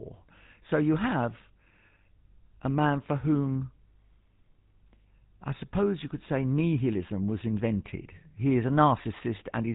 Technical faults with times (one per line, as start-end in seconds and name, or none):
0.00-9.75 GSM full-rate codec